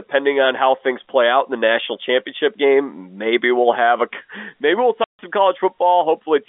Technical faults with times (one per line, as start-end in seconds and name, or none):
5.04-5.19 packet loss filled with silence